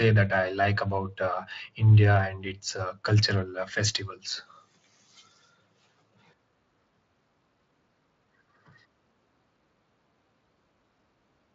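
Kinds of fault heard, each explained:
No faults heard in this speech clip; the audio is consistent with a lightly coded speech path whose band stops a little below 8 kHz.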